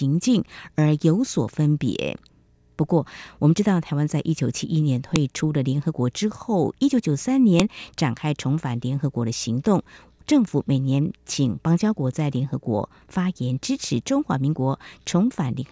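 At 5.16 s and again at 7.60 s the speech gets hit by a sharp, loud snap, a file header played as audio. The pieces were joined without stripping their WAV headers, so those few dozen bytes get read as samples. That's why each join snaps regardless of the speech underneath.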